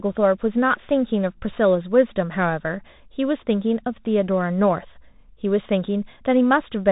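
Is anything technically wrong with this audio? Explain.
Yes. Throughout the speech runs through a Bluetooth CVSD headset codec, and the damage is plainly audible. Nothing above about 3.8 kHz survives. CVSD sends one bit per sample, stepping the waveform up or down with an adaptive step, which fits a 64 kbps link. Fast loud high content outruns the step, so sibilants turn scratchy over a granular hiss. That grainy slope distortion, not just the missing top, separates it from simple telephone-band filtering.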